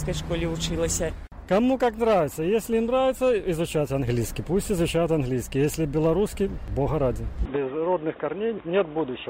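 At 7.45 s the sound abruptly turns narrow and boxy and stays that way until the clip ends, with no gap at the join and no real jump in loudness. The likely cause is an input switched to a poorer device partway through recording. From that point the band stops at 3.8 kHz. A spectrogram shows the upper region going empty along a sharp horizontal edge, with a faint new noise floor about 35 dB below the signal. The waveform's envelope stays roughly level.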